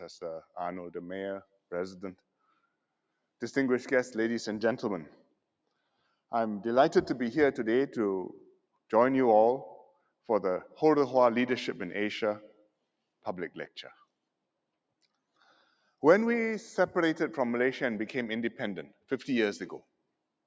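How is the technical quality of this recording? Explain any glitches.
The main problem is a run of short dropouts where the noise suppressor cut into the actual sound, from about the middle of the clip onward.

They land at 9.85–10.02, 12.5–12.71, 13.69–14.04, 18.9–19.11 and 19.8–20.02 s, each roughly a fifth of a second or less. The suppressor mistook what was playing for noise and pulled it down hard, by about 15, 18, 14, 15 and 19 dB. You hear brief sinks or holes in level. There's no content above 8 kHz, which is just the call microphone processing doing its normal job.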